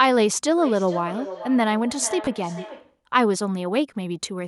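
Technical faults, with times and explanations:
0.57–3.02 s, feedback echo between two devices: A second device in the same room replays the far end's speech into a microphone whose echo canceller only removes its own playback, so the speech returns about every 400 ms, thinner and ringing, peaking at about 13 dB below the speech.
2.25–2.27 s, lost LE Audio frames: A 20 ms stretch of the Bluetooth LE Audio stream went missing, which fits two lost 10 ms frames. The LC3 decoder patched it by repeating the last spectrum with scrambled signs, turning the sound there into a brief noisy smear.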